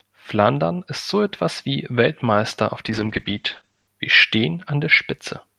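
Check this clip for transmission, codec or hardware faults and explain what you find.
One transmission fault is present: a call bitrate drop from 2.88 to 3.97 s. The bandwidth estimate fell and the encoder coded more coarsely. Highs above 8 kHz vanish, and the speech turns rough and muffled, which fits a fall from 48 to 9 kbps.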